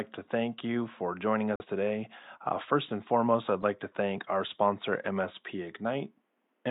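In this speech clip, the sound drops abruptly into silence from 1.56 to 1.65 s, right after "thank you for joining", a gap of about 96 ms that fits a single lost frame. This is a corrupt frame muted: flipped bits made the decoder reject that compressed frame, so the player filled its slot with silence while timing carried on. The faint room noise, about 49 dB below the speech, vanishes along with everything else during the gap.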